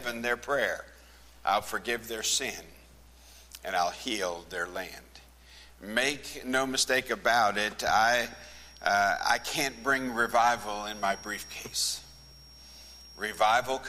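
Feedback whistle from 7.95 s to the end: a thin, steady 5.6 kHz tone well under the sound, likely a loudspeaker-microphone loop poised at feedback.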